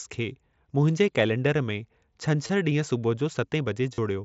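Concealed Bluetooth headset packet loss at 2.47 s and 3.94 s: the missing stretches, about 22 and 38 ms, were refilled with repeated recent waveform, giving brief buzzy tones over the mSBC speech.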